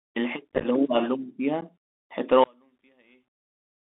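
Bluetooth CVSD headset codec, throughout: the whole clip carries the sound of a narrowband headset link, consistent with 64 kbit/s CVSD. Here the speech is confined to roughly 250 Hz to 3.6 kHz, so it sounds thin and boxy. The codec sends one up-or-down bit per sample with an adapting step, and the damage is plainly audible: sibilants turn scratchy, loud bright passages roughen as the step falls behind, and a granular hiss sits beneath everything.

Unconcealed Bluetooth headset packet loss, 0.52 to 0.66 s and 1.61 to 1.63 s: packets between headset and phone went missing and were replaced by silence rather than patched over. In the first stretch about 79 ms drops out in pieces scattered across 150 ms, the longest gap near 15 ms, which points to around twenty lost packets and gives a chopped, crackly texture with hard-edged holes. The second, about 11 ms, a few packets' worth, is a brief abrupt gap that can click.

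One channel inverted, 2.44 s to the end at 3.97 s: the level collapses by about 37 dB, and the speech all but disappears, leaving only a faint residue. The likely cause is one stereo channel flipped in polarity, so the material common to both sides, including the centred speech, cancels when the channels are summed to mono. Only the small difference between them survives.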